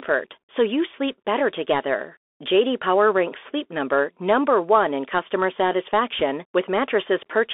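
From start to finish the speech runs through a Bluetooth CVSD headset codec. CVSD codes the signal one bit per sample, up or down, with a step size that adapts as it goes, which fits a 64 kbps headset stream. The band is squeezed to roughly 300 Hz to 3.5 kHz, so the top end is simply gone. The coding damage is plainly audible: sibilants turn scratchy, and a grainy hiss sits under everything.

Between 6.19 and 6.22 s there's a short burst of bit errors on the Bluetooth voice link, with the error rate somewhere around one percent. Because every CVSD bit carries the same small weight and a wrong step fades out on its own, you get a quick rushing crackle across those few hundredths of a second rather than a sharp click.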